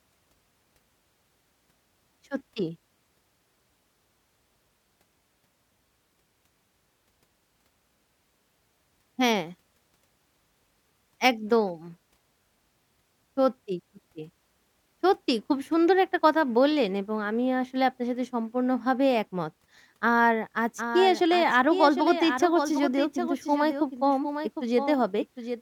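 Speech, and from 20.78 s to the end there's a doubled audio track: a full-band copy trails the original by roughly 0.7 s, around 10 dB quieter, dry with no room colour, starting abruptly. Likely a second capture through a slower path.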